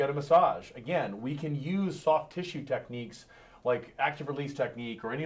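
No technical faults can be heard in this audio.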